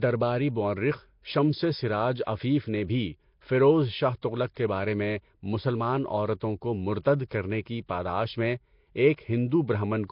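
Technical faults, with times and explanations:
Throughout, Nellymoser compression: the audio was most likely squeezed through Flash's Nellymoser Asao codec, whose coarse fixed bit budget fits a rate around 22 kbps. That leaves many bands with no real bits, so they are filled with synthetic noise, and the damage is heavy. The speech carries a rough, hissy halo and a smeared, underwater colour, and nothing is present above 5.3 kHz, which dulls consonants.
2.24–2.27 s, 4.22 s, 4.54–4.57 s and 9.16–9.18 s, pre-echo: each sharp onset landed late in a transform block, and the coder spread quantisation noise sized for the loud attack across the whole block, including the quiet stretch before it. A brief hiss of about 11 to 28 ms runs ahead of each attack, which then sounds softened. The first follows "مورخ شمسِ سراج" and precedes "عفیف نے بھی فیروز". The third follows "بھی فیروز شاہ تغلق" and precedes "کے بارے میں مسلمان". 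The last follows "کرنے کی پاداش میں".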